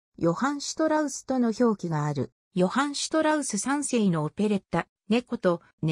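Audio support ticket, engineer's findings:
Channel delay (comb filtering), 0.00 to 2.52 s. Hollow, phasey tone. One channel late by a few samples, a fraction of a millisecond; mono sum cancels at evenly spaced frequencies, first notch around 3 kHz. Probable component: misaligned channel path.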